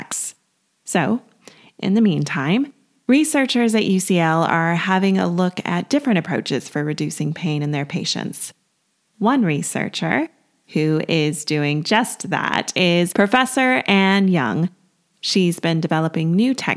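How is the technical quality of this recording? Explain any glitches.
No technical faults can be heard in this speech recording. There are no glitches to explain.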